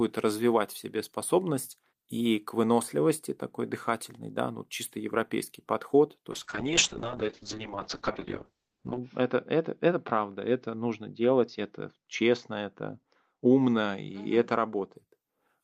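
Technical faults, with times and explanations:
6.33–15.01 s call bitrate drop: the encoder starves, so the speech turns watery and rough as highs fall from 20 kHz to 8 kHz. Unlike plain filtering, the coding artefacts suggest a rate near 6 kbps.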